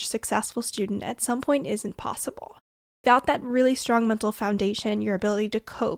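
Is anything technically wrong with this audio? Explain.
Yes. At 2.97 s there is a clipped start after a pause. After about half a second of silence, the output device had dropped into a low-power state and needed time to wake. The first 71 ms of speech is swallowed. The next word starts abruptly, missing its opening sound.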